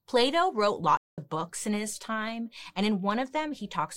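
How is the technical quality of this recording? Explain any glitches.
The speech cuts out abruptly at 0.97 s and stays silent until 1.18 s, a gap of about 206 ms, before resuming with "books in his time". This is a playback stall: the sound stops mid-flow rather than fading, then picks up again. The likely cause is the player running short of buffered audio, or its output thread being held up, so nothing reached the output until it recovered and carried on.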